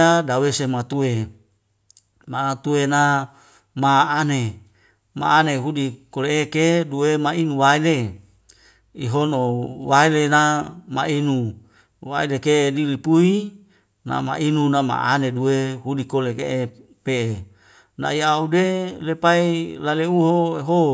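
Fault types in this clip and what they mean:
No fault types are present in this clip.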